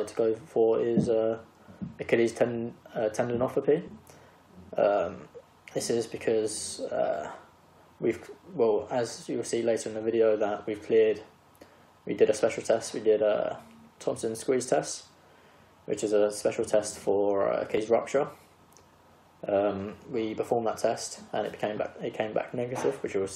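At 17.78 s the audio has an abrupt jump forward, as roughly 40 ms of material disappears and the two sides are spliced directly with no gap. This is likely a dropped buffer (overrun), where the capture buffer was overwritten before it was read.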